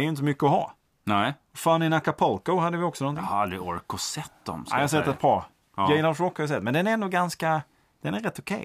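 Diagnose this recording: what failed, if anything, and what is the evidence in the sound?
No failure is evident anywhere in this recording.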